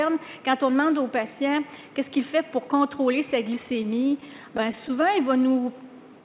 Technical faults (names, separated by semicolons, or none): repeated stalls (stutter); jitter buffer slow-down